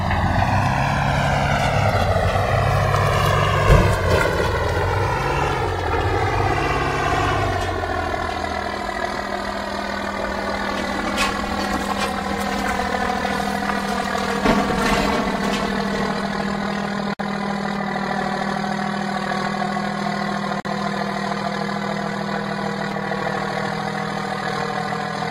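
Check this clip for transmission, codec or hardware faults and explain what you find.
Two faults are present: a slow drift between the channels throughout, and two brief silences at joins.

Channels drifting apart: separate clocks let the inter-channel delay creep to around 7 ms, which fits a mismatch of roughly 200 ppm. In mono this produces slowly sweeping flanging, unlike the fixed colouration of a static delay.

Gap at a join of encoded pieces: silences at 17.14–17.19 s (57.5 ms) and 20.60–20.65 s (49.4 ms) come from encoder start delay and end padding left in. Sound resumes exactly where it stopped, so nothing is skipped as in a dropout.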